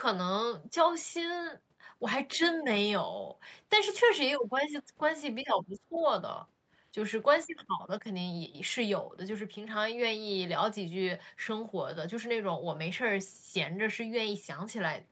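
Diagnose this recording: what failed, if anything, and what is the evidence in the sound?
The speech dips briefly around 2.36 to 2.40 s, by about 5 dB, then sags much harder from 5.43 to 6.04 s, falling roughly 20 dB. That is speech suppressed in double talk, likely the call's echo canceller turning down the near talker while both sides spoke at once.

A second, faint voice slips in from 2.42 to 2.59 s at about 30 dB below the speech, and again from 5.94 to 6.06 s at about 20 dB below. This is the other side's voice leaking through: likely loudspeaker echo the canceller failed to fully remove from the microphone.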